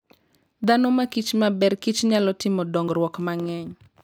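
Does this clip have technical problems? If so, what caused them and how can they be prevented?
Yes. There are three short skips in the speech, at 0.64 s, 1.62 s and just after "nyalo timo" at 2.88 s. At each one the speech jumps forward with no gap, losing about 20 ms. The likely cause is a dropped buffer (overrun). The recording software fell behind, and the hardware overwrote a block of samples before it was read. The sound on either side was joined directly. Larger buffers and a lighter processing load during recording prevent this.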